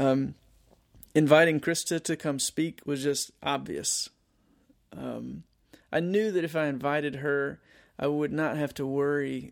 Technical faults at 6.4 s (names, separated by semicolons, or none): one channel drops out